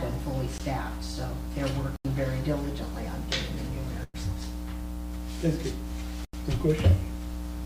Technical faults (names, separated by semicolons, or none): block of digital silence; call audio freeze